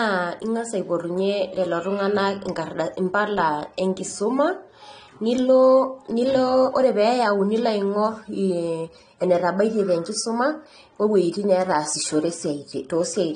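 From start to finish the speech sounds dull and smeared, with a warbling, fizzy edge on sibilants and held sounds, and nothing above 9.7 kHz. This is plainly audible AAC compression, likely AAC-LC at a low bitrate around 32 kbps, which cuts the top band and leaves spectral holes.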